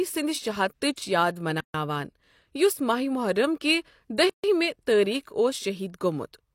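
At 1.61 s and again at 4.30 s, after "محرم کِہ", the speech drops into silence of about 139 and 142 ms, a gap at a join of encoded pieces: separately encoded segments kept their start delay and end padding. Unlike a dropout, nothing is lost; the speech resumes exactly where it stopped, edges smeared.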